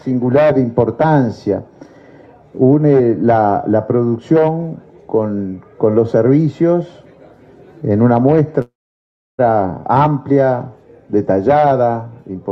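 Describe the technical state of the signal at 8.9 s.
At 8.9 s the signal sits inside a call audio freeze from 8.61 to 9.41 s, likely from delayed packets draining the jitter buffer. A brief fading buzz or hiss gives way to about 0.68 s of silence, a blank gap on spectrogram and waveform, before audio resumes intact, about 0.77 s late.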